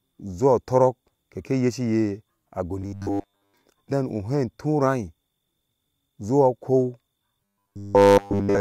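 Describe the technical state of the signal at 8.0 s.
Robotic sound from repeated short buffers covers 8.0 s, running from 7.45 s to the end of the clip at 8.61 s. The likely cause is audio arriving too seldom, so the playback side keeps looping a tiny 10 ms slice instead of the real signal, and essentially all of this stretch is repeated material. That fixed repeat rate imposes a 100 Hz buzz, turning the speech into a rigid, metallic drone that only loosely follows the original.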